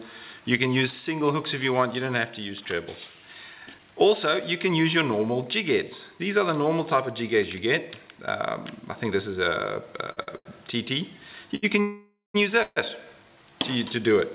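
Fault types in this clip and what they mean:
Short stall from a late packet: late packets emptied the jitter buffer, so four sounds between 10.12 and 11.55 s are stretched by 43 to 82 ms.
Call audio freeze: packets likely delayed in transit starved the jitter buffer, so a buzz or hiss fading to silence fills 0.54 s at 11.81 s and 0.14 s at 12.62 s.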